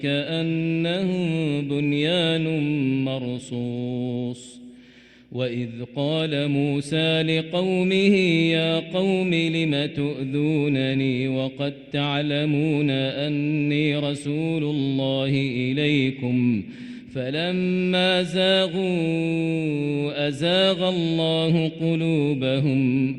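Nothing goes wrong anywhere here, with no dropouts, glitches or other technical faults turning up at any point in the audio.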